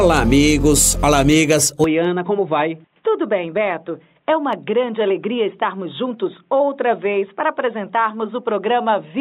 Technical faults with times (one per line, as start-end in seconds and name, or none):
1.84-9.21 input switched to a poorer device